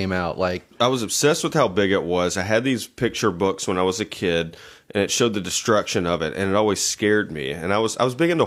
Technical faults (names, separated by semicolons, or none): none